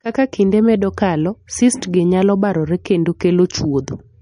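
Speech, likely passed through MP3 compression at a starved bitrate, with damage that fits something around 40 kbps. Short of bits, the encoder has cut the treble at 10.2 kHz, so nothing sounds above that line for the whole recording, and it has zeroed quieter frequency lines that flicker in and out between frames. The result is plainly audible throughout: a watery, swirling texture, metallic chirping on s sounds, and smeared consonant onsets.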